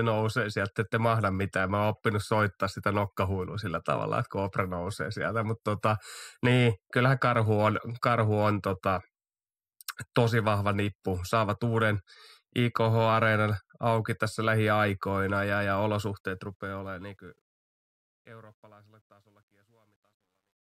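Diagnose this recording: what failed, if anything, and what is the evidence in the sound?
Truncation distortion on a fade at the sample-format conversion stage. From 16.07 s, just after "tässä lähiaikoina ja ja", the fade-out (which starts around 16 s and ends at 20.8 s) turns gritty. From 18.27 to 20.79 s the grit is at its worst. The gain stage rounds off the low bits without dither, which points to about 11 bits. The waveform shows square stair-steps, and the spectrogram shows broadband hash.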